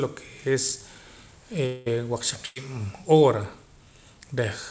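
At 1.66 s the speech breaks off, and for about 200 ms, until 1.88 s, what you hear is the receiver stretching the last sound into a buzz or hiss that fades rather than real audio. That's likely a long network dropout: nothing arrived for that stretch, so the concealment filled the whole gap, with no true silence. When the speech returns, roughly 200 ms of it is simply gone, so it picks up further on than where it stopped.

Then at 2.46 s there's a burst of packet loss, running to 2.58 s. Here the gap is shorter: about 98 ms of concealment, covering about 100 ms of missing audio. The receiver again held on to the last sound and turned it down as the gap went on, giving a held buzz on a voiced sound or a fading hiss otherwise. The speech resumes past the lost part. Through all of this the call codec's band limit is in place, with nothing above 8 kHz, which fits G.722.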